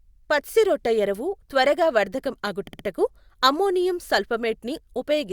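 Just after "పచ్సిరొట్టఎరువు త్వరగా వర్థకం", from 2.67 to 2.85 s, repeated frames make the speech stutter. A 60 ms block replays three extra times, adding 180 ms, which fits a short run of compressed frames sent again. A spectrogram shows identical repeated patches.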